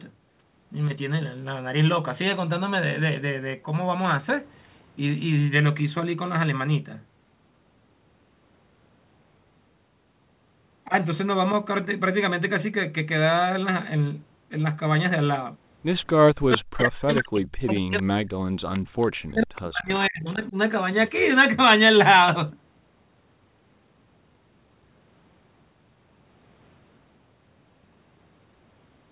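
From 16.31 to 18.73 s the speech is suppressed in double talk. It dips by as much as about 40 dB, for roughly two seconds in all. The likely cause is an echo canceller muting both talkers while the far side spoke. At 18.74 to 18.79 s comes an echo leak. A faint copy of the voice returns 452 ms late, about 20 dB below the speech. Another scrap follows at 19.01 to 19.07 s, about 30 dB down. This is likely residual loudspeaker echo the canceller missed. Suppression returns at 19.18 to 19.9 s, again up to about 40 dB deep. It comes back at 20.07 to 20.56 s, shallower at about 25 dB. Inside that span, at 20.27 to 20.32 s, one more brief echo leaks through, 452 ms delayed and about 30 dB down.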